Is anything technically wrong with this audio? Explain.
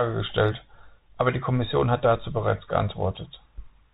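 Yes. Throughout the speech, the audio has passed through a Bluetooth CVSD headset codec, consistent with a 64 kbps stream that encodes each sample as a single up-or-down step with adaptive size. Nothing above 4 kHz survives, s sounds turn scratchy, loud bright passages distort, and a granular hiss sits underneath.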